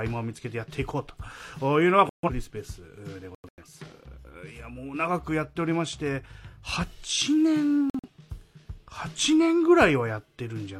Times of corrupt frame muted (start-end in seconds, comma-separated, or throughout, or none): 2.09-2.29, 3.35-3.63, 7.90-8.10